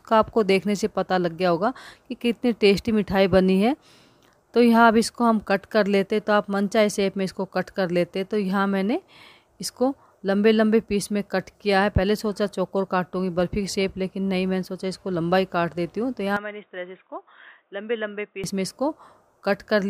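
At 16.37 s the sound abruptly turns dull and boxy, with nothing above 3.8 kHz, drops roughly 10 dB in level and picks up a faint new noise floor, then clears at 18.44 s with no gap. The likely cause is an input switched to a poorer device.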